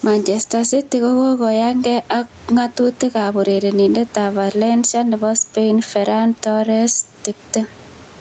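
Gain pumping runs right through the clip. The gain drops by around 10 dB whenever the speech gets loud, so the loud and soft parts end up squashed together. The likely cause is mic gain set far too hot, with a fast limiter clamping down on each peak.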